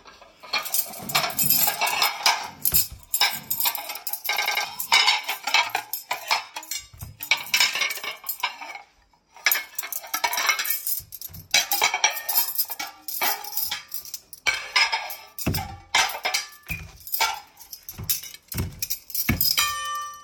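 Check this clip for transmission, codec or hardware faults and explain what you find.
Two repeated buffer faults. At 0.93 s one 93 ms piece plays twice. From 4.37 to 4.64 s one plays four times. Audio arrived late, so the device replayed its last buffer, which fits a 4096-sample buffer. Each is a stutter with hard joins, losing about a tenth and three tenths of a second.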